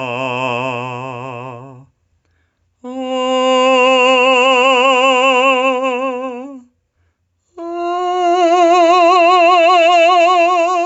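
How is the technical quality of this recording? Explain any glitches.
The music has one real problem, gain pumping, running the whole way through. The level keeps breathing up and down by around 10 dB, so quiet moments swell and loud hits get shoved back down. That's likely the input gain set far too hot with a fast limiter clamping each peak. There's nothing above 8 kHz, which fits the bandwidth of the call path it went through.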